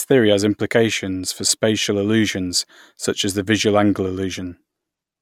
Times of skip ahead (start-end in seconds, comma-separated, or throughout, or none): none